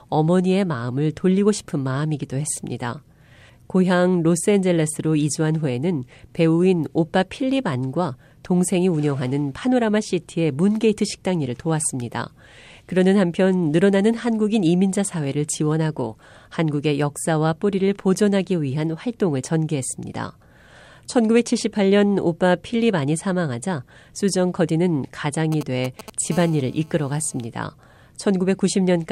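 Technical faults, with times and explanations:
25.52–26.10 s, GSM signalling bursts: A nearby 2G phone sent brief groups of radio bursts while signalling, and the audio circuitry rectified them. The result is a galloping dit-dit-dit of short 217 Hz buzzes, roughly 15 dB below the speech.
26.32–27.47 s, GSM phone buzz: The phone then transmitted in bursts during a call, pulsing 217 times a second, and the circuit again demodulated those pulses. It produces a hard, raspy 217 Hz buzz rich in harmonics and unrelated to the speech, about 24 dB below it.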